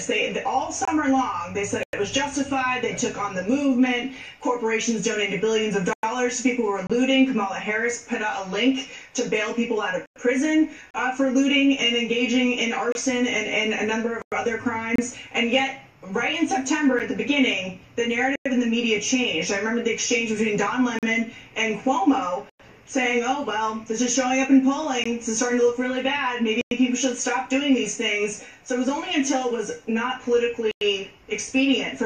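Right at 0.85 to 0.88 s there's a tiny hard-edged dropout, about 23 ms: that's a gap between stream segments, where two segments' timestamps don't quite meet and the player pads the hole with silence. It recurs on the roughly 2 s segment grid at 6.87–6.90, 10.91–10.94, 12.92–12.95, 14.96–14.98, 16.99, 20.99–21.03 and 25.04 s, ranging from about 9 ms to 41 ms. Nothing's lost, just brief holes of silence.

Then there's a meatier gap between chunks: clean 100 ms holes starting at 1.83, 5.93, 10.06, 14.22, 18.36, 22.50, 26.61 and 30.71 s, steady every 4.1 s or so. The audio's delivered in 4 s chunks with silence wedged between them, likely from codec padding or a late-starting player. The sound resumes where it left off, but each join is a regular stutter.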